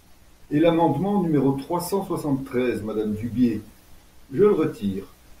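No technical faults are audible anywhere in this recording.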